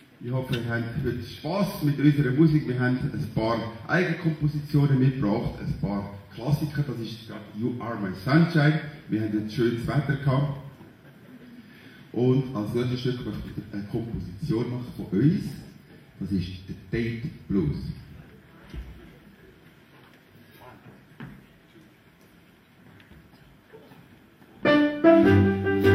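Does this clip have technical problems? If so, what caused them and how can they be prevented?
No, this clip has no technical problems, so there is nothing to trace to a cause or to prevent.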